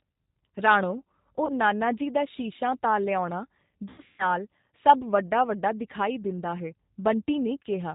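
Speech throughout sounds band-limited, slightly rough and synthetic, with nothing above 4 kHz, which fits the 8 kbit/s G.729 codec rebuilding the voice from a vocal tract filter and pitch pulses. At 1.46 to 1.53 s, just before "ਜੀ ਦਾ", and again at 3.89 to 4.26 s, right after "ਤਾਂ ਲਿਆਉਣਾ", the voice smears into a fading buzzy tone or coloured noise and stays weak or distorted afterwards. This is VoIP packet loss concealed by the speech codec: about 30 ms is missing at the first spot, while at the second about 240 ms is missing, scattered over 300 ms with one 150 ms run.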